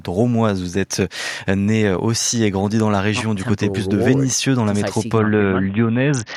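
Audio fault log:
5.18–6.36 s, Bluetooth SBC bit pool drop: treble dulls and grit creeps in till the end, consistent with SBC starving its top sub-bands at roughly 60 kbps.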